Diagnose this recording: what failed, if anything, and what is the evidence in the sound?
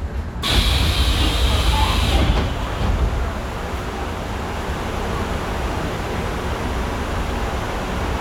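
Nothing failed; no stage in the chain shows trouble.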